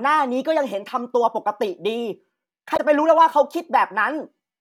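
A speech recording with damaged data in a compressed stream at 2.73 to 2.80 s: corrupted frames make the decoder lose sync, producing a brief glitch that shows as a short disruption on the spectrogram.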